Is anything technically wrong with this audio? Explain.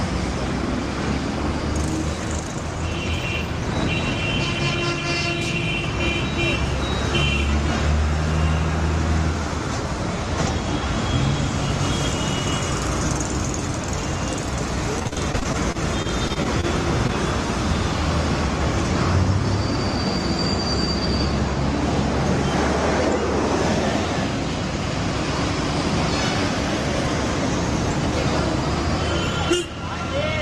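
Yes, there are two packet-loss problems.

From 14.99 to 16.65 s there's repeated packet loss with a robotic sound: over a dozen short dropouts, the longest about 42 ms, each papered over by stretching the previous sound. About 17% of that stretch is concealment, so it comes across as choppy, with pieces missing.

Then at 17.07 to 17.10 s there's a short concealed packet loss. Roughly 20 ms never arrived in time, and the receiver filled the gap by extending the last sound before blending back into the real signal. You hear it as a tiny smear or wobble.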